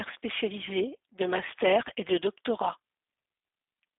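From start to finish the speech has passed through a G.729 codec, the G.729A variant, and its character fits the 8 kbit/s rate. The sound is narrow, roughly 250 Hz to 3.6 kHz, with nothing above 3.8 kHz. Each 10 ms frame is rebuilt from a vocal tract filter and sparse pulses, which makes it plainly rough and synthetic.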